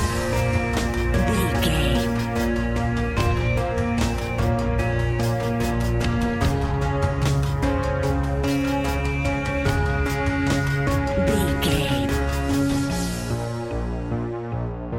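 No technical faults are audible.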